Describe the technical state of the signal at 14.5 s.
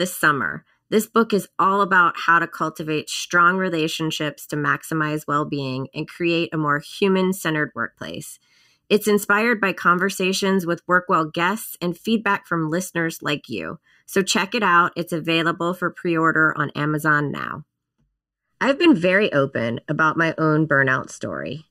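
At 14.5 s the speech carries channel delay (comb filtering), present for the whole clip. One channel trails the other by under a millisecond. Summed to mono, they cancel at evenly spaced frequencies, the first near 700 Hz. The result sounds hollow and phasey.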